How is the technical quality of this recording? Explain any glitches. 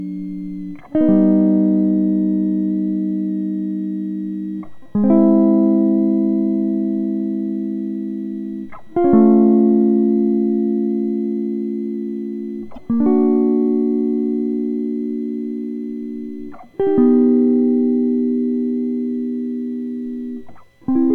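Two technical faults affect this music recording: a constant high whistle and one brief glitch.

A switching supply whistle runs throughout. A switching power supply in audible burst mode or beating with another one puts out a faint tone wandering between 1.89 and 2.16 kHz, roughly 45 dB below the music.

Damaged data in a compressed stream occurs from 12.74 to 12.78 s. Corrupted frames made the decoder lose sync and hunt for the next header, producing a short blip.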